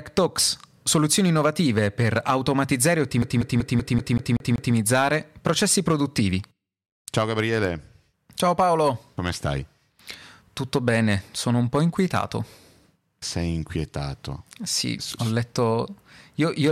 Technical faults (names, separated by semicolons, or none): hard clipping; CD stuck on one turn